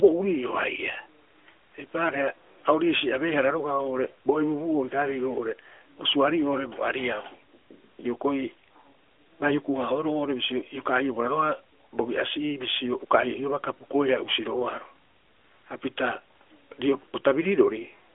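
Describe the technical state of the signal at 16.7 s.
At 16.7 s the signal is intact, with the narrowband mobile codec path behaving as a phone line normally does and no fault present at that moment.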